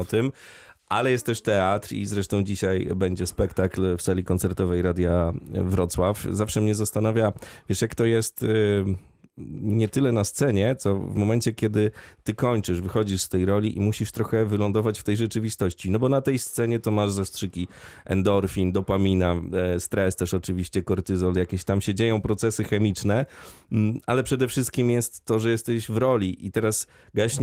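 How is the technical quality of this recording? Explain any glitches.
Nothing here counts as a glitch; the speech simply comes through Opus voice compression in its hybrid mode at 24 kbps, which leaves only a light touch on the sound.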